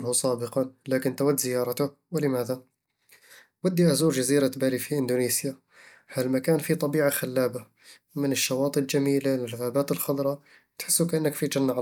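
No technical faults can be heard anywhere in the recording; the signal stays continuous and stable throughout.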